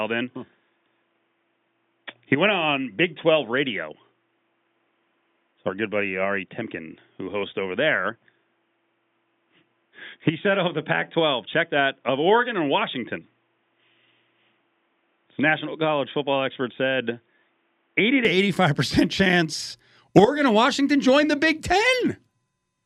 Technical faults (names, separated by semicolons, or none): input switched to a poorer device